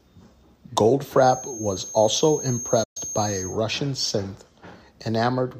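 A speech recording with two faults. From 1.12 s to 3.61 s, a feedback whistle is present, most likely because the loudspeaker-to-microphone loop was held right at the edge of oscillation. The loop keeps reinforcing a single frequency without tipping into a howl, so a thin, steady tone near 6.4 kHz rides behind the speech, sitting roughly 10 dB under it and swelling and fading slowly in strength before it stops. Inside that stretch, between 2.83 s and 2.97 s, a playback stall occurs: the player likely starved of data or had its output thread held up, so nothing reached the output for 120 ms. The speech drops out mid-flow and then resumes, and the whistle continues on both sides of the gap.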